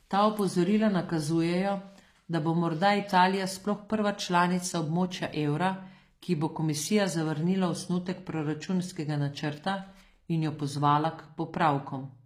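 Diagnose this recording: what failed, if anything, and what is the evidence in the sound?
Codec stage. Throughout, s sounds are gritty and lispy under bright, synthetic treble. Likely HE-AAC compression rebuilding highs from lower bands, which fits about 24 kbps.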